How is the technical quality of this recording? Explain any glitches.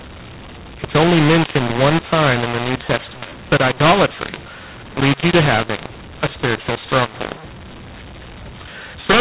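The quality is poor because of a decoding fault running through the whole recording. The speech is carried as G.711 telephone audio, band-limited to 4 kHz.

mu-law and A-law mixed up, throughout: the speech was coded with mu-law but decoded as A-law, so each 8-bit code maps to the wrong level. Loud and soft parts come out rescaled unevenly, quiet moments are pushed up into audible noise, and the voice sounds harsh and distorted.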